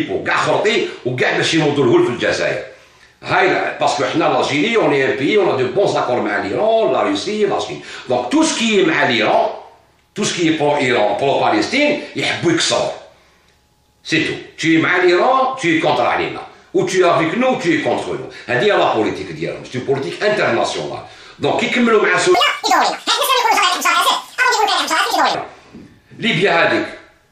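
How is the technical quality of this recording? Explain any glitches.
There is one glitch. From 22.35 to 25.35 s the audio was read two samples at a time (double speed). The reader takes each pair of samples as a single frame, so the sound runs twice as fast and an octave higher, shifted 12 semitones. On a spectrogram every component jumps up by a factor of two.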